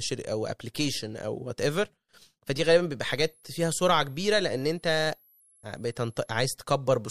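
From 3.05 s to 6.38 s, a switching supply whistle sits under the speech: a high, thin tone wandering between 10.5 and 11.9 kHz, roughly 35 dB below the speech. A switching power supply is oscillating at an audible rate, and its frequency drifts as the load shifts.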